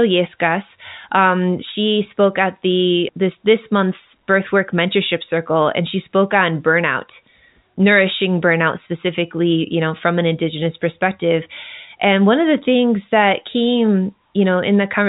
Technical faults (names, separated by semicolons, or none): none